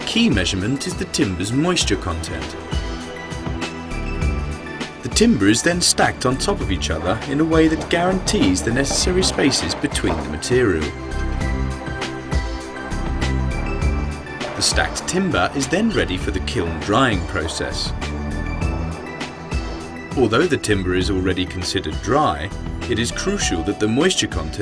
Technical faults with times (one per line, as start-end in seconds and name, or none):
none